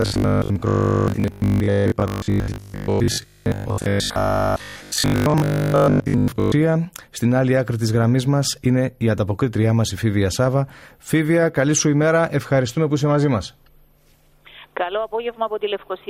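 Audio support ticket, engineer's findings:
Robotic sound from repeated short buffers, 0.02 to 6.52 s. Metallic, locked buzz at 50 Hz, with roughly two-thirds or more of the audio replaced by repeats. The 50 Hz pitch fits a 20 ms buffer looping. Likely cause: input starving, with the playback or decode stage re-playing its last block while real audio gets dropped.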